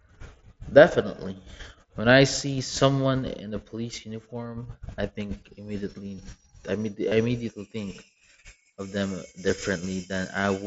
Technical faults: concealed Bluetooth headset packet loss

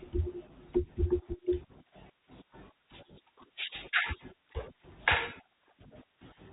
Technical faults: none

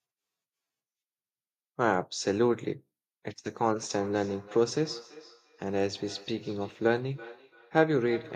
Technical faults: feedback echo between two devices

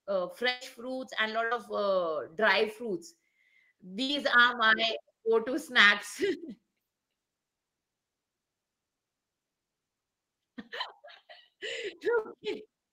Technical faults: burst of packet loss

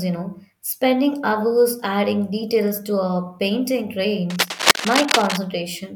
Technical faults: cable scratch noise

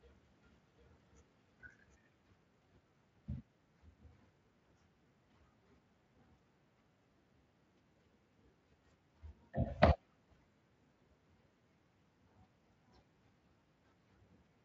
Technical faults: doubled audio track

